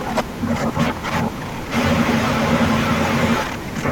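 Nothing in this recording stood out as a problem on listening.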